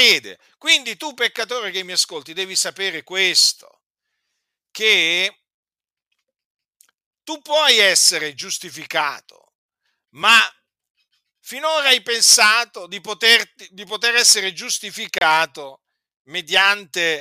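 At 1.36 s, just before "che mi ascolti devi", the speech drops into a block of digital silence about 10 ms long, heard as a sharp tick. A second, 30 ms block from 15.18 to 15.21 s reads more as a brief hole. In both, the samples were zeroed, likely because the output buffer was not filled in time, so the signal stops and restarts abruptly without any fade.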